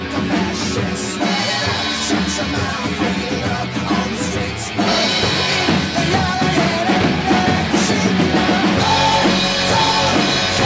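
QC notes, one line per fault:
0.00–4.88 s, channel delay (comb filtering): one channel trails the other by roughly 10 ms, so the mono sum cancels at evenly spaced frequencies starting near 50 Hz, giving a hollow, phasey sound. A spectrogram shows fixed horizontal notch stripes up to the 8 kHz call-band ceiling.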